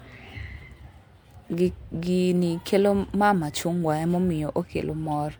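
From start to finish the speech has a swirly, hollow quality, with smeared consonants and softened attacks, more than a single 128 kbit/s MP3 pass would produce. This points to generation loss, likely from about four successive MP3 encodes, each requantising on a shifted frame grid.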